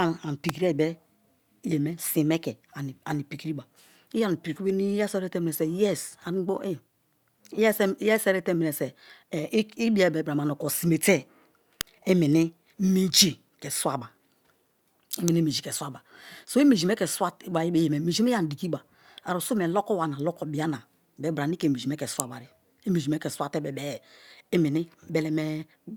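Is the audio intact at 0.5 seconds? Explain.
No. A nearby switch, motor or static discharge likely arced at 0.49 s, and the audio line picked up that burst of energy. It sits on top of the speech as a sharp snap peaking at about -10 dBFS: an electrical switching spike.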